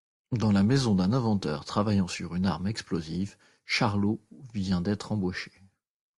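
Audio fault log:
No faults are present in this speech recording, and the signal stays continuous and steady throughout.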